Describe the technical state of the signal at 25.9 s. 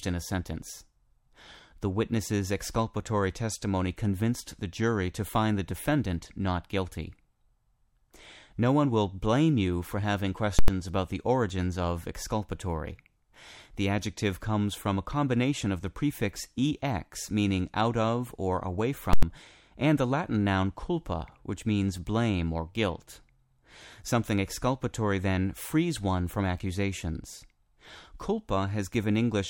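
At 25.9 s the speech signal is intact, with no audible technical fault at that moment.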